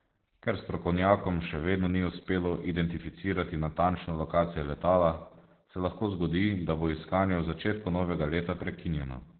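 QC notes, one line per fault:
Throughout: Opus voice compression. Heavy codec damage, with nothing above about 4.3 kHz. The speech is confined to a narrow, telephone-like band and sounds muffled, hoarse and slightly robotic. The narrowband cut-off and the coarse rendering of the excitation are what the SILK linear-prediction coder produces when starved of bits. The sound points to a rate around 8 kbps with 20 ms frames, where detail in the source signal is largely discarded.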